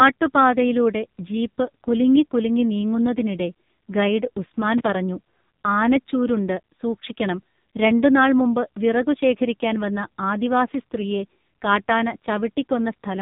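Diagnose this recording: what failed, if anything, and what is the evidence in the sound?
Buzzy, synthetic speech with nothing above 3.8 kHz throughout: the codec stage, an AMR narrowband mobile codec, coding heavily enough to fit a low mode near 6 kbps.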